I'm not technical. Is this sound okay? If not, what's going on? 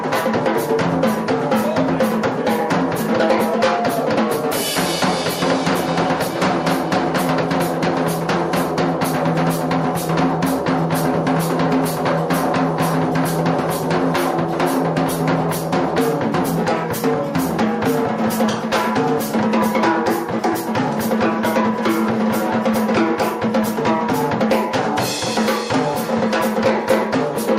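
Yes, it sounds fine; nothing here needs fixing.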